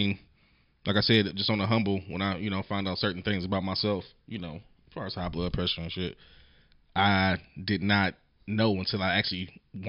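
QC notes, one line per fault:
No faults found in this speech recording. Nothing here calls for a fix or a second listen.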